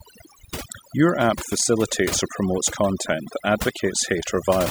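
From start to finish, the speech carries the marks of overdone noise removal. A noise reduction stage was driven too hard against a noisy original, so it cuts individual frequency bands deeply whenever their level sits close to its noise estimate. Low-level parts of the speech fall below that threshold and are removed along with the noise. Between phrases the background drops to near silence broken by twinkling specks.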